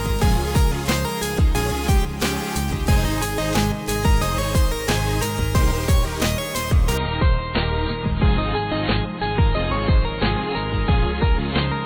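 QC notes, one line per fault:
6.97 s to 11.86 s, adaptive stream at a lower bitrate: with no gap or dropout, the sound abruptly turns dull and smeared, nothing survives above about 4.5 kHz, and a watery, swirling codec texture rises through to the end. The player has switched mid-stream from a higher-quality rendition to a much leaner one, the sudden loss of bandwidth fitting a step down from around 128 kbit/s MP3 to roughly 16 kbit/s as the connection slowed.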